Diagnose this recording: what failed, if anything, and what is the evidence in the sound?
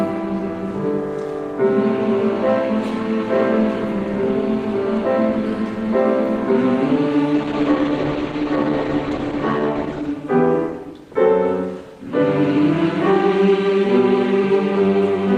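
Call bitrate drop at the codec stage: from 7.35 to 10.19 s the sound turns coarser and rougher, consistent with the encoder being throttled from roughly 32 to 13 kbps.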